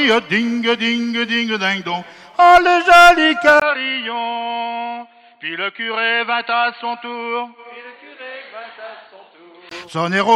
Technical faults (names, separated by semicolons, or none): input switched to a poorer device